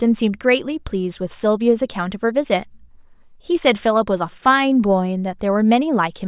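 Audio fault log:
No faults found.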